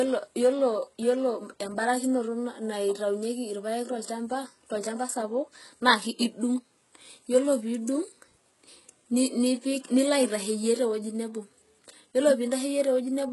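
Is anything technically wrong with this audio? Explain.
Yes. HE-AAC compression runs throughout the speech. The audio stops dead at about 11.5 kHz, and heavy coding damage makes the s sounds gritty and metallic, likely from treble rebuilt by copying lower bands upward, which fits a very low bitrate near 12 kbps.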